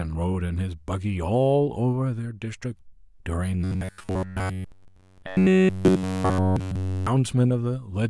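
From 3.64 to 7.07 s, the speech turns into a rigid metallic buzz near 93.8 Hz. This is robotic sound, likely from roughly 10.7 ms buffers repeating throughout.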